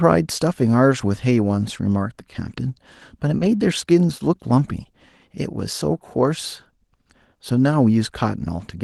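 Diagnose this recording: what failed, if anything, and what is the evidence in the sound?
Lost packet rebuilt from error correction, network stage, at 3.41 to 3.47 s. The speech doesn't drop out, but for about 40 ms it turns rougher and noisier before clearing. That length suggests two separate 20 ms packets lost in transit. Each was replaced by the low-bitrate copy that Opus in-band error correction carries inside the following packet. The decoder played that coarser copy, so continuity holds at the cost of detail across the span.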